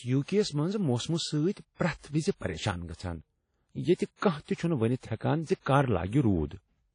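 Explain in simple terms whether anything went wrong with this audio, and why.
The speech was likely run through WMA compression, an older Windows Media Audio format that shrinks files by throwing detail away. The damage is plainly audible from start to finish: a ringing, washy sound, a hiss that swells and fades with the voice, and nothing above 10.1 kHz.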